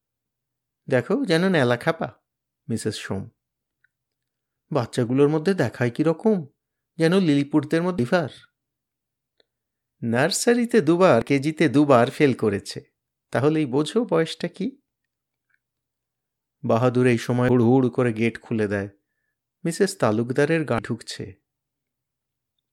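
At 7.98, 11.22, 17.49 and 20.78 s, damaged data in a compressed stream makes the decoder misread corrupted frames and lose sync, producing brief chirps or blips in the speech. Each shows as a thin vertical broadband streak on a spectrogram and a sharp glitch in the waveform.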